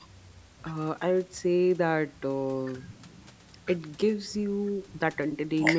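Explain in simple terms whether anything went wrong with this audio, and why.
Nothing stood out as wrong on listening to this speech, which went through a call's usual microphone processing that trims away the very deepest bass, as it normally does.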